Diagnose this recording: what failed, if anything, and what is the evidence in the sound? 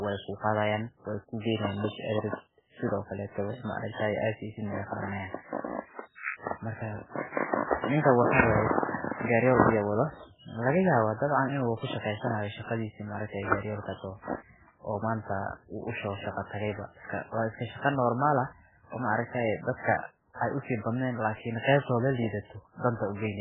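Codec stage, throughout. Heavy watery, swirly damage and nothing above 3.8 kHz point to MP3 compression, likely at a bitrate near 8 kbps.

Pre-echo, same codec. A short hiss precedes attacks at 7.79, 9.08 and 9.22 s, lasting 52, 34 and 31 ms. Quantisation noise spreads across each block, ahead of the attack.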